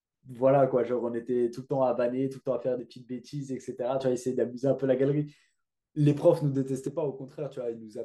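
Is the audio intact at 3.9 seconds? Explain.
No. At 3.9 seconds the clip is inside a stretch from 2.80 to 4.00 s where one channel drops out, most likely because one side of the stereo feed stops delivering signal for that span. Once the two channels are summed to mono, the speech shared by both sides suddenly falls by about 6 dB, and anything carried only on the lost side vanishes. Level recovers abruptly when the span ends at 4.00 s.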